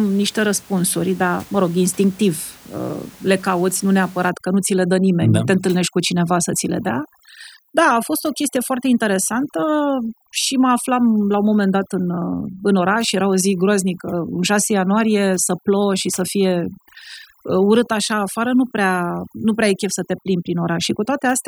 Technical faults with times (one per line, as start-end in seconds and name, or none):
4.30-21.47 overdone noise removal